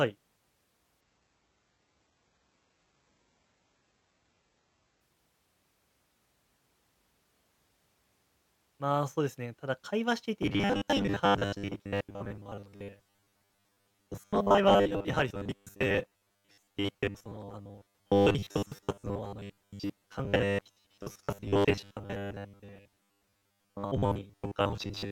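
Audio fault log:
1.01–5.01 s, adaptive stream at a lower bitrate: the speech abruptly loses everything above 8 kHz and takes on a thin, swirly, synthetic top, then snaps back to full quality at 5.01 s with no gap at either edge. The sound points to the stream dropping from a mid-rate AAC version to a very low-rate HE-AAC one while the connection slowed. On a spectrogram, the energy above 8 kHz disappears at a clean vertical edge and reappears just as sharply.
10.43–25.12 s, robotic sound from repeated short buffers: from 10.43 s to the end, the speech becomes a rigid, metallic buzz at 100 Hz that still roughly tracks the syllables. The likely cause is audio arriving too seldom, so the player repeats the last 10 ms of sound while new data is skipped. Around two thirds or more of what is heard is repeated material. A spectrogram shows a fixed comb of harmonics at multiples of 100 Hz, and the waveform shows near-identical 10 ms segments repeating back to back.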